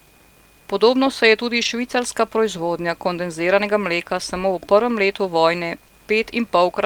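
At 1.57 to 1.67 s, between "se je" and "švicarska proizvodnja kondenziranega mleka", and again at 4.17 to 4.19 s, before "samo v prvem letu", a lost packet was rebuilt from error correction. The decoder played low-bitrate copies carried in the following packets, so there is no gap, only 60 ms and then 20 ms of rougher, noisier sound. This is consistent with three lost packets in the first case and one in the second. On a spectrogram these stretches show blurred, grainier harmonics.

At 5.87 to 5.91 s, just after "v prvem letu vojne", there is short concealed packet loss. About 20 ms never arrived, and the decoder filled it by extending the preceding sound before blending back. It is heard as a brief smear.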